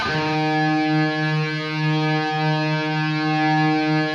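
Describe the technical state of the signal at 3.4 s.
At 3.4 s the signal is intact, with no dropout, distortion or other audible fault at that point.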